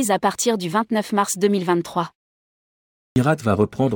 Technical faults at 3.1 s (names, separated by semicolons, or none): clipped start after a pause